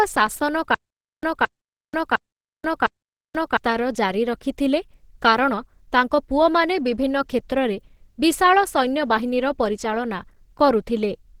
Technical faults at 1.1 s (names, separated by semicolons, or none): Opus compression; stutter with silent gaps